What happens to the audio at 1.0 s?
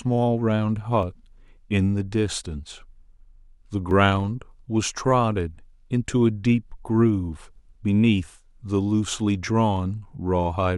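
At 1.03 s the speech jumps slightly forward with no gap of silence. It is likely a dropped buffer (overrun): samples weren't read out before being overwritten, so roughly 10 ms vanished and the surrounding audio was spliced together.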